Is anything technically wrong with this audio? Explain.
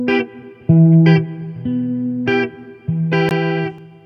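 Yes. Bluetooth dropout at 3.29 s: a brief gap of about 19 ms, likely one wireless packet arriving too late and being discarded, after which the sound resumes as if it had kept playing.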